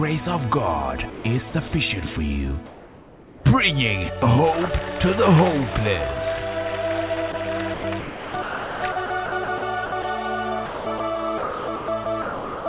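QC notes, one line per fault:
1.1 to 1.24 s and 7.32 s, sound dropped by the voice detector: the audio gives way to flat filler noise, about 140 ms the first time and a 20 ms blip the second. The sender's detector likely mistook quiet sound for background and briefly stopped sending.
1.5 to 1.72 s, 7.74 to 10.04 s, 10.66 to 11.0 s and 11.38 to 12.66 s, sound chopped by the voice detector: the sound keeps cutting in and out. That's the detector likely toggling transmission repeatedly, swapping out roughly 80 ms, 1.1 s, 220 ms and 880 ms.
2.66 to 3.44 s, comfort noise in place of the background: for about 780 ms the real background, sitting about 22 dB under the loud parts, turns into a smooth, featureless hiss about 3 dB quieter, likely because the receiver is filling a transmission pause with generated noise.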